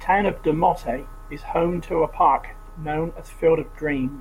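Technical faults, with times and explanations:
Nothing technical stands out here; the speech comes across without any faults worth flagging.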